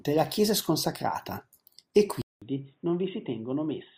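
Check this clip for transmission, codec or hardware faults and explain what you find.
One fault is present. At 2.22 s the input likely switched to a poorer device, moving capture to a narrower-band microphone path. After a 200 ms silence, the speech runs to the end with nothing above 3.8 kHz. It is roughly 10 dB quieter, dull and boxy, over faint new background noise.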